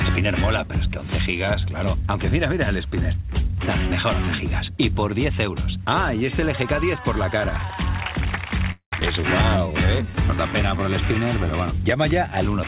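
At 8.72 to 8.94 s there's a call audio freeze. The last sound trails off into a fading buzz or hiss, then about 100 ms of silence, likely because packets stalled and the jitter buffer ran dry. Nothing's lost; the audio just resumes 200 ms late.

Right after, at 9.00 to 9.03 s, comes a skip ahead. Roughly 150 ms of audio is dropped and the two sides butt together with barely a seam, so it sounds like a sudden jump forward.

From 9.11 to 10.79 s there's a jitter buffer slow-down. Repeated pitch periods stretch things by 130 ms, so playback runs at about 93% speed at the same pitch, with drawn-out sounds. All of this rides on a narrowband call path with nothing above 4 kHz, which fits G.711.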